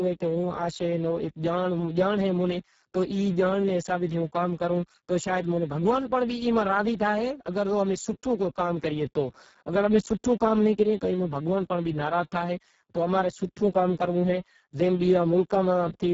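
The whole of this speech clip has been through the Speex codec at a very low quality setting, with heavy codec damage that points to a bitrate of roughly 6 kbps. With so few bits left for the excitation, the CELP coder cannot track the voice's fine detail, so speech comes out hoarse, noisy and buzzy, edging toward a robotic, vocoder-like tone. Nothing remains above 7.6 kHz, and the band from 4 kHz upward is only a shaped, noise-like fill.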